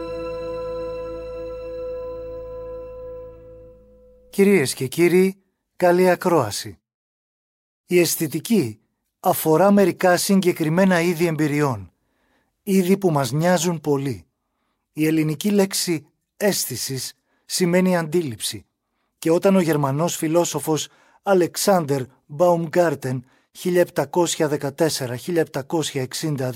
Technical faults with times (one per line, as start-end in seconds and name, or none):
none